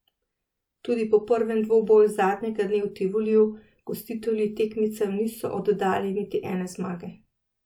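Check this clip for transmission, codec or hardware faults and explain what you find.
Checking this clip turned up no faults to explain.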